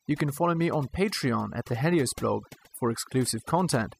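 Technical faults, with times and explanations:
Throughout, overdone noise removal: the noise reduction on this speech was pushed too hard, so any frequency band sitting close to the tool's noise estimate is pulled far down or shut off entirely. The background noise between phrases collapses into near silence scattered with brief twinkling specks where isolated bands flicker on and off, while the quieter parts of the voice are removed along with the noise.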